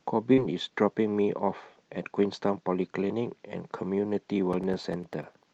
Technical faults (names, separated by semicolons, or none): short concealed packet loss; periodic USB or driver dropouts